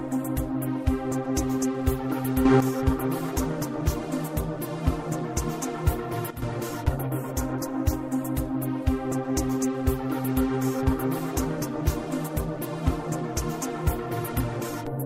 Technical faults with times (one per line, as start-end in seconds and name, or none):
2.45-2.60 sudden gain jump
6.30-6.42 sudden gain jump